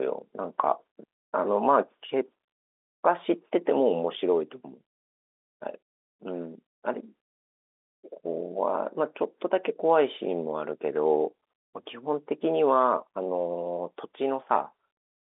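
No faults are audible anywhere in this telephone-band speech.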